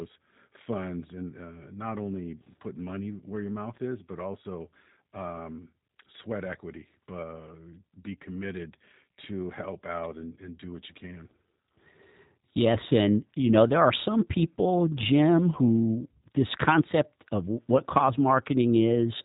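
From start to finish the speech carries G.729 codec damage, and it is plainly audible. The encoder discards the waveform and resynthesises each 10 ms frame from a vocal tract filter, a pitch predictor and a few sparse pulses; this is the 8 kbit/s G.729A variant. Nothing survives above 3.8 kHz, so sibilants are dull and thin, and voiced sounds take on a rough, buzzy, synthetic grain.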